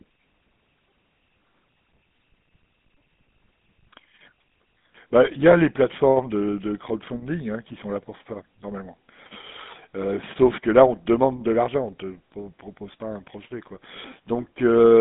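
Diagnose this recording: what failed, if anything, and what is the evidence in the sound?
Gravelly, buzzy speech throughout, nothing above 3.8 kHz. Codec stage: a GSM full-rate codec rebuilds the voice from sparse, regular pulses, consistent with 13 kbps.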